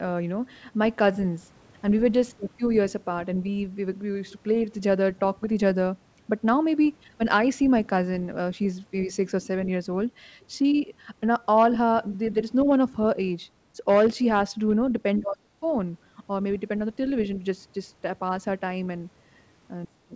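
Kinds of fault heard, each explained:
Other side's voice leaking through: From 6.84 to 6.89 s a brief, very faint scrap of a second voice surfaces, roughly 30 dB below the main speech. It is likely loudspeaker echo picked up by the talker's microphone that the echo canceller failed to subtract completely. The residue slips through as a short fragment rather than a sustained voice, so it registers as a momentary ghost beneath the speech.
Speech suppressed in double talk: The main speech dips at 9.07–9.12 s by only a few decibels, falls away far more sharply at 15.2–15.66 s with a drop of about 35 dB lasting around 400 ms, and sinks again by about 25 dB from 19.86 s to the end. The likely cause is an echo canceller treating the talker's speech, overlapping the far side, as echo and turning everything down together.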